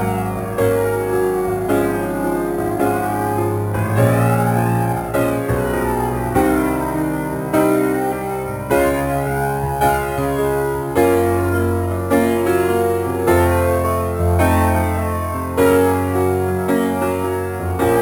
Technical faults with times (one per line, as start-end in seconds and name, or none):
0.00-18.01 imaging from sample-and-hold upsampling